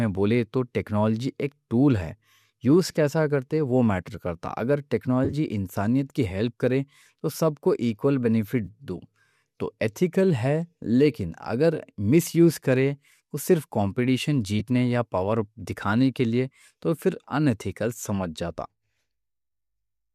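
Lost AAC frames, filled in by the decoder's frame loss concealment from the last good spectrum, leave brief smeared, noisy patches: 5.25 to 5.34 s, before "انسانیت کی ہیلپ کرے", scattered short gaps; 8.65 to 8.68 s after "کو ایکوال"; and 14.6 s, between "کرے وہ صرف کمپیٹیشن" and "یا پاور دکھانے کے". The gaps fit 10 ms frames, and the light graininess likely comes from low-delay AAC.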